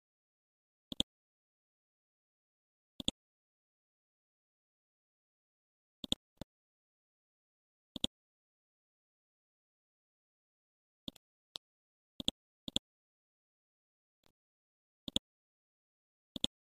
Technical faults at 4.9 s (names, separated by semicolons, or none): none